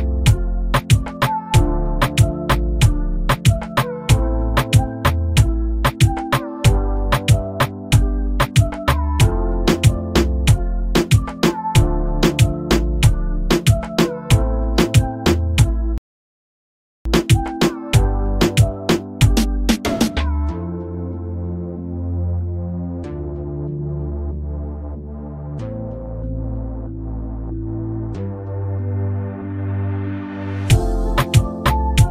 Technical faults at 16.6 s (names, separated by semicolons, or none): rebuffering stall